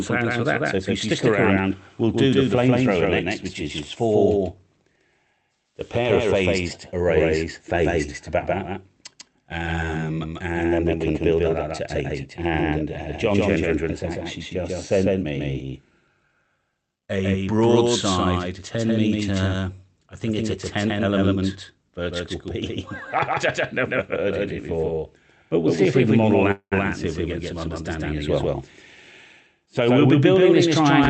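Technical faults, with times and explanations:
Throughout, doubled audio track: a full-band copy at roughly equal level trails by about 150 ms, likely from a second capture path; waveform shows every onset repeated.
26.51–26.74 s, call audio freeze: sound stalls for about 200 ms, a fading buzz or hiss then about 80 ms silence, likely packets held up; spectrogram shows smeared stripes, then a blank gap.
29.65 s to end, jitter buffer speed-up: audio runs about 9% faster at unchanged pitch, roughly 150 ms trimmed; waveform shows slightly compressed spacing without any spectral shift.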